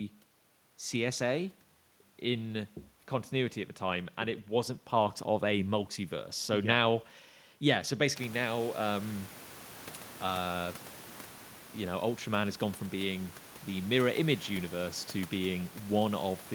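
No technical faults occur anywhere in the recording.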